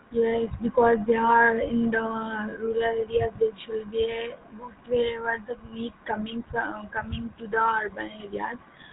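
From the start the speech carries the buzzy, gravelly roughness of the GSM full-rate codec, plainly audible here. It models the vocal tract, drives it with sparse regular pulses, and passes nothing above 4 kHz, so the sound is dull and grainy throughout.

Between 2.5 and 2.53 s there's a short stretch of lost GSM frames. The decoder repeats the last good settings, giving a brief metallic ring. Its roughly 20 ms length points to a single dropped frame.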